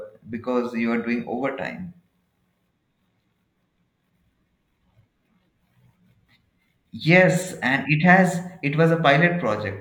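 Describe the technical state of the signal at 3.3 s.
At 3.3 s the speech signal is intact, with no audible technical fault at that moment.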